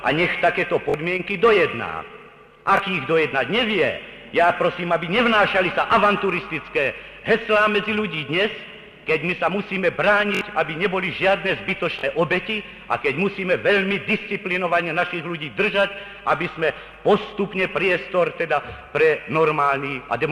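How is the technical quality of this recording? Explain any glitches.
Four short playback glitches stand out, all of the same kind: a repeated buffer. New audio failed to reach the device in time, so it replayed its last block of about 21 ms, which fits a 1024-sample buffer. Each replay joins hard onto the one before and drops a few tens of milliseconds of real audio, so the glitches are heard as brief stutters. The block repeats twice extra at 0.90–0.94 s, once at 2.77–2.80 s, three times at 10.35–10.41 s and twice at 11.99–12.03 s.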